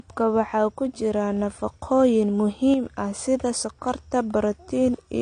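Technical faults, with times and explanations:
Throughout: low-bitrate audio saved at a high bitrate. The file behaves like a roomy MP3 at around 192 kbit/s, yet nothing exists above about 9.6 kHz, and the speech carries the artefacts of a heavily squeezed encode. That combination likely means an earlier low-bitrate pass, something like 32 kbit/s AAC, stripped the top end and detail first. Re-encoding at a generous rate just preserved that damage in a bigger file without bringing anything back.
2.74 to 2.86 s: sudden gain jump. Right after "waxaa ku jira nafaqooyin" the level drops abruptly by about 6 dB, and the speech and the background noise fall together, which points to a gain change in the signal path rather than anything the speaker did. It lasts roughly 0.12 s and recovers before "ah sida sonkor". Because the step lands between one sample and the next with no ramp, it likely comes from a gain setting or bit shift applied instantly, so the edges sound hard rather than faded.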